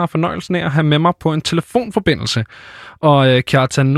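Nothing in the speech stood out as a technical problem on listening.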